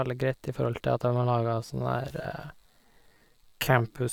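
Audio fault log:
1.02–4.12 s, time-stretched section: from 1.02 s to the end, the speech abruptly drags to about 0.67 times its earlier pace while its pitch stays unchanged. The slowed stretch drags, with syllables drawn out. This is likely software lengthening that portion to fill a set duration. It holds pitch by repeating short slices of the waveform.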